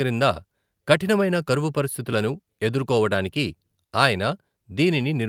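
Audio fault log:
No technical faults are present in this speech recording; the signal is continuous and intact throughout.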